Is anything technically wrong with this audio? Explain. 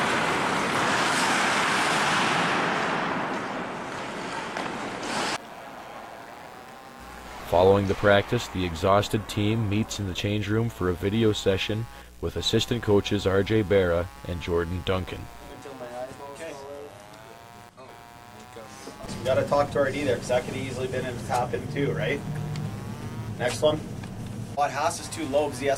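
Yes. Computer activity noise runs through the whole clip. It is a buzzing chirp pulsing at roughly a hundred times a second, about 25 dB below the sound. Processor or graphics load shifts the shared ground, so the noise follows the computer's activity, not the audio.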